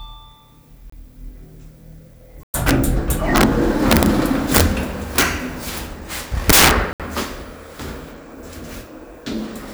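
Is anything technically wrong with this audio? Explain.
Yes. The audio has two kinds of fault.

There are three short silences: at 0.90 to 0.92 s (27 ms), 2.43 to 2.54 s (105 ms) and 6.93 to 7.00 s (67 ms). Each is likely a Bluetooth stall, where delayed packets let the receiving buffer run empty. The sound stops dead and then resumes, which sets it apart from crackle or distortion.

Integer overflow cracks at 2.68 to 2.71 s, 3.36 to 3.44 s, 3.91 to 4.06 s, 4.55 to 4.61 s and 5.18 to 5.22 s, where peaks are driven about 2 to 6 dB over the limit. The worst is at 6.50 to 6.71 s, at about 23 dB over. Peaks wrap to the opposite extreme instead of flattening, so they snap far more harshly than clipping.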